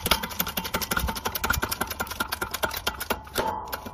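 The audio carries no audible technical faults anywhere in the recording.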